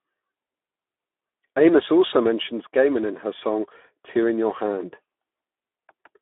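From start to finish the speech passes through the Speex codec at a low-to-middle setting, consistent with around 11 kbps. Damage is plainly audible: with few bits for the excitation, the voice comes out hoarse and grainy. The band is narrowed to roughly 250 Hz to 3.5 kHz, like a telephone line. On a spectrogram, energy stops sharply near 3.7 kHz with nothing above, and harmonics look smeared and noisy rather than cleanly striated.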